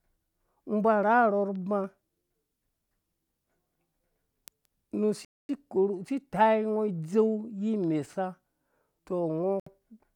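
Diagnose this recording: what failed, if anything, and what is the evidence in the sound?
The speech cuts to dead silence twice: at 5.25 s for 0.24 s, and at 9.60 s for about 67 ms. Each time it resumes. That points to the wireless playback link, and the likely cause is a Bluetooth stall. Packets to the headphones were held up, and their buffer ran empty. Playback paused until the delayed audio arrived, then carried on.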